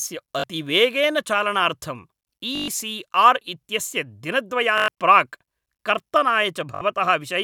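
A brief buzzing stutter breaks into the speech four times: at 0.40 s for about 41 ms, at 2.55 s for about 122 ms, at 4.78 s for about 102 ms, and at 6.75 s for about 61 ms. This is Bluetooth stutter. Audio packets arrived late or not at all, so the receiver kept replaying its last short slice, producing a machine-gun rattle, and then jumped ahead as if the speech had carried on.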